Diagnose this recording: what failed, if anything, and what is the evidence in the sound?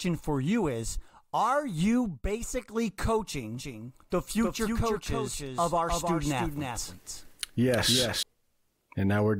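A doubled audio track runs from 3.55 s to 8.23 s: a full-band copy of the speech trails roughly 300 ms behind, about 5 dB quieter, with no decay or room colour, and it switches on and off abruptly. On a spectrogram every syllable pattern appears twice, offset horizontally. The likely cause is a second, slower capture path mixed in at the driver or routing stage.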